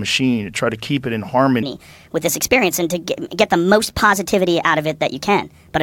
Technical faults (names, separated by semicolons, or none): wrong sample rate